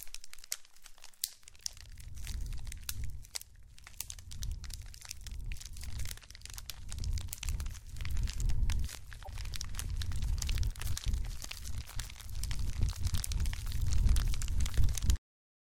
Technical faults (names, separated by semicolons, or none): bit error spike; broken MP3 bit reservoir; cut-off end